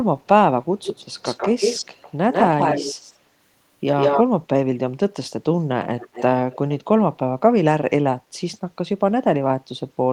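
Echo leak is heard from 0.8 to 2.14 s, 2.3 to 3.17 s and 3.97 to 4.23 s, where a copy of the speech trails by 150 ms, at first a few decibels under it and then about as loud. It returns from 5.84 to 6.23 s and 6.51 to 6.58 s with a 240 ms delay, now faint, roughly 15 to 25 dB down. The likely cause is a far-end loudspeaker whose echo canceller let some of its own output through. On a spectrogram each speech pattern appears twice, shifted right; the waveform shows ghost envelopes behind the syllables.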